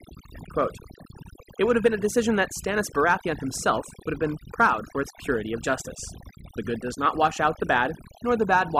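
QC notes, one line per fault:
Throughout: overdone noise removal. Noise reduction set too strong pulls individual frequency bands down or out wherever they sit near the noise estimate, taking quiet speech detail with them. The background drops and breaks up into twinkling specks. Unlike a plain low-pass or band-limited sound, the loss flickers band by band over time rather than holding a fixed cut-off.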